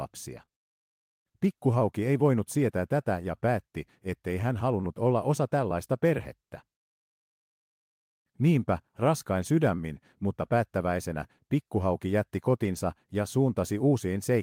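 From 0.37 to 0.43 s the speech turns briefly rougher and noisier, with no gap. This is a lost packet rebuilt from error correction: about 40 ms, which fits two packets, was replayed from low-bitrate copies. From 0.45 to 0.49 s a short smear follows, a short concealed packet loss in which about 20 ms went missing and the decoder extended the preceding sound before blending back.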